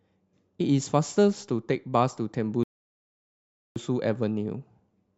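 At 2.63 s the player's buffer of downloaded audio runs dry, producing a rebuffering stall: playback halts until more data arrives. The speech drops into silence until 3.76 s, then picks up exactly where it stopped, with nothing missing but about 1.12 s added.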